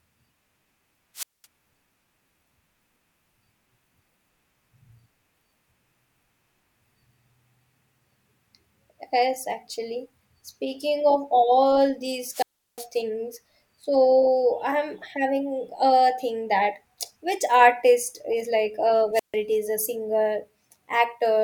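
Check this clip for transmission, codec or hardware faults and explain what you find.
The speech carries three wireless microphone squelch dropouts. They fall at 1.15 to 1.46 s with a mute of about 0.21 s, at 12.31 to 12.86 s with a mute of about 0.36 s, ending just before "things so I'm", and at 19.13 to 19.35 s with a mute of about 0.14 s. Each time the analogue FM link's signal weakens, hiss climbs briefly, then the receiver's squelch gate shuts the output, leaving a near-silent hole until the carrier recovers and the speech comes back.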